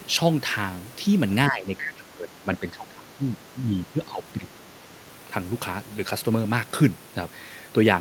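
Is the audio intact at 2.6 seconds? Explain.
No, 2.6 s falls inside a stretch of speech suppressed in double talk that runs from about 1.48 to 4.55 s. The level keeps dipping through that span, adding up to roughly two seconds of ducked audio, with the deepest drops around 15 dB. The likely cause is both ends talking at once, so the echo canceller couldn't tell this talker apart from the loudspeaker echo and pulled everything down together.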